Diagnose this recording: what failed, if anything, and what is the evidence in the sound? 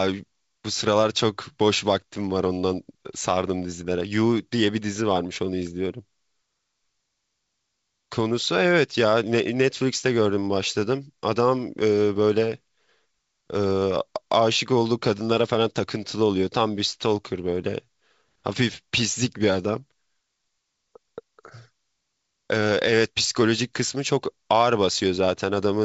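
Nothing failed; no faults heard.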